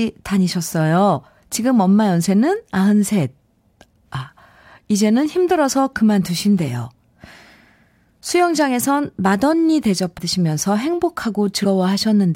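At 10.17 s and 11.64 s, compressed frames are skipped: roughly a tenth of a second of speech vanishes, so the audio jumps ahead.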